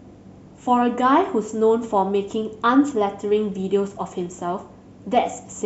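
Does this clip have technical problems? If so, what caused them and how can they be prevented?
No, no technical faults are audible.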